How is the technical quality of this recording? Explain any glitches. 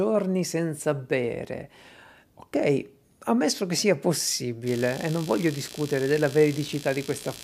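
The recording has one fault. From 4.66 s to the end, computer activity noise appears: a buzzing chirp pulsing at around 70 per second, roughly 15 dB below the speech. It comes from processor or peripheral load disturbing the audio circuit's shared ground.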